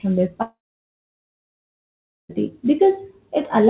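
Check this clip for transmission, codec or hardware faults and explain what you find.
The speech breaks off for almost two seconds in a way that points to lost packets rather than a codec or hardware problem. It comes through a narrowband call path with nothing above 4 kHz.

From 0.42 s to 2.31 s there is a long network dropout, likely the cause of this gap. About 1.88 s of audio is missing. The receiver stretches the last sound into a brief fading buzz or hiss, then leaves roughly 1.75 s of silence before speech resumes with the lost portion gone. On a waveform this shows as a short tapering tail followed by a flat line. On a spectrogram it is a brief smeared band, then an empty block.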